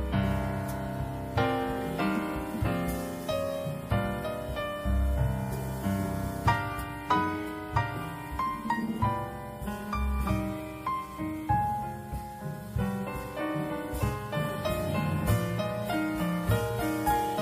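No technical faults can be heard anywhere in the recording. Nothing in the signal calls for a timestamp or a closer look.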